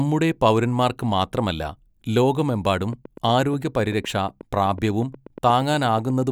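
A speech recording with a train of clicks from 2.81 s to 6.23 s. Around thirty near-identical pops tick at a steady 8.2 per second, roughly as loud as the speech, and carry on through pauses. Interference from nearby equipment or a faulty connection or power supply is the likely cause.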